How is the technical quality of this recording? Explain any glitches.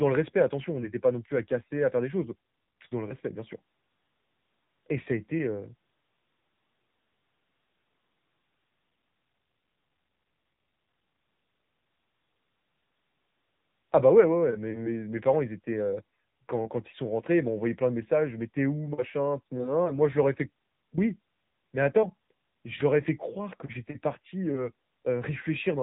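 The quality is limited by telephone-style coding. Throughout the speech, the AMR narrowband mobile codec cuts everything above 3.8 kHz and rebuilds speech from a pitch-and-pulse model, plainly audibly, consistent with a low mode near 8 kbps. Unlike a simple low-pass filter, it adds a buzzy, synthetic texture.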